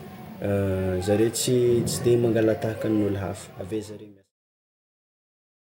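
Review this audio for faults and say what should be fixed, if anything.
Nothing stood out on listening to this speech, and the smooth fade-out that begins around 3 s and reaches silence at 4.34 s is a deliberate edit that needs no fixing.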